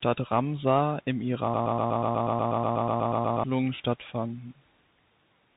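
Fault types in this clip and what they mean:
Bluetooth CVSD headset codec: The speech has been squeezed through the one-bit delta coder that Bluetooth headsets use, where each sample only nudges the level up or down with an adapting step, and the damage is plainly audible throughout. The sound fits a 64 kbit/s CVSD link: sibilants turn scratchy and a granular hiss sits under everything. A spectrogram shows a hard ceiling at 3.8 kHz with a speckled noise floor below it, and loud waveform peaks look slewed and stair-stepped.
Broken-record loop: From 1.54 s to 3.44 s a fragment of about 0.12 s plays again and again, back to back, roughly sixteen times, with whatever speech belonged in that stretch missing. This is likely a playback or streaming stall in which the last held buffer kept being resent. On a waveform it appears as identical short blocks tiled in a row, and on a spectrogram as a comb of repeating vertical stripes at about an 8 Hz rate.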